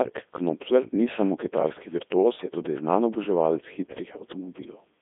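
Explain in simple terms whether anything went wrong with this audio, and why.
The speech was squeezed through a Codec 2 vocoder, a digital-radio coder that keeps only pitch, loudness and a rough outline of the voice, then rebuilds it from pure tones. From start to end, this sounds heavily robotic, buzzy and thin.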